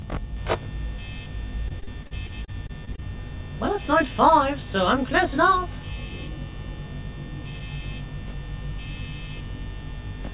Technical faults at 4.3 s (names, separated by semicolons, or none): channel delay (comb filtering)